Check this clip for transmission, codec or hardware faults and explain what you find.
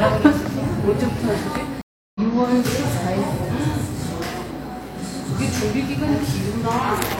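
One fault is present, a stream reconnect between 1.81 and 2.20 s. The connection dropped, playback went silent for 337 ms, and a fresh decoder picked up mid-stream. The sound resumes around 0.3 s further on, so that stretch is skipped.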